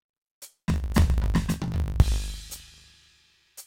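Throughout the music, a block size mismatch (truncated) is at work: one stage hands over longer blocks than the next stage takes in, so the tail of every block is discarded. The sound fits 1024-sample blocks being cut short. Each cut leaves a discontinuity, and these repeat as a steady 50 Hz buzz. Because material is skipped every block, the music runs about 1.16 times fast while keeping roughly its normal pitch.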